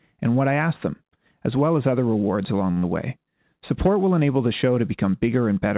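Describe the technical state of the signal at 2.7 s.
At 2.72 s a short stall from a late packet begins: a packet arrived too late, the jitter buffer ran dry, and the receiver stretched the last sound for about 46 ms, until 2.79 s, before resuming at the same point. Nothing is lost, but the speech is held too long, with a faint buzz or dip in level. On a spectrogram the harmonics run flat and unchanging across the gap; on the waveform the same cycle shape repeats, and everything after it sits about 46 ms later.

From 2.79 s to 2.85 s comes short concealed packet loss, where about 40 ms of speech never reached the decoder. The receiver filled the hole by continuing the preceding sound, then blended back into the real audio, giving a brief smear or wobble where a short consonant can disappear. A spectrogram shows a smoothed, blurred patch where detail should change, and the waveform shows a crossfade seam at 2.85 s. 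Throughout, the G.711 mu-law call path leaves nothing above 4 kHz, which fits a 64 kbps call codec.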